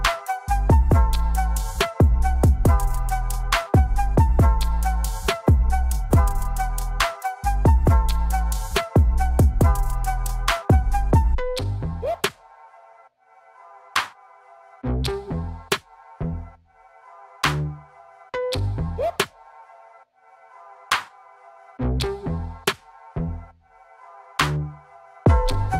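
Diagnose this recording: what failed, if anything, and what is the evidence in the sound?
Nothing failed; no stage shows an audible fault.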